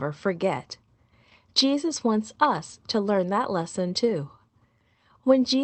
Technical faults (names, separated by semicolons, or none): scattered short gaps; jitter buffer slow-down